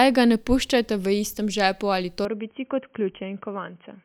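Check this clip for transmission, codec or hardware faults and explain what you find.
One fault is present. Input switched to a poorer device, at 2.25 s to the end: the recording likely moved to a narrower-band microphone. With no gap at the switch, the speech abruptly turns dull and boxy, losing everything above 3.2 kHz, drops about 5 dB in level, and gains a faint new noise floor.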